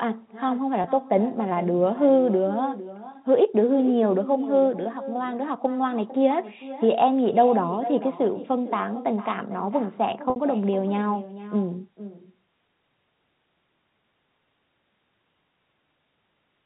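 Throughout the speech runs an echo with no canceller: the far end's loudspeaker feeds its microphone, and the signal returns after roughly half a second of round trip, about 15 dB down, as a thinner shadow trailing each phrase.

Packet loss with pitch repetition occurs twice. From 0.82 to 0.84 s a 20 ms gap, consistent with one lost packet, is filled by repeating the last pitch period, heard as a brief buzzy hold. From 10.30 to 10.36 s a 60 ms loss, pointing to several consecutive packets, repeats and fades toward silence before speech resumes through a short cross-fade, all within the 4 kHz band of the G.711 telephone coding.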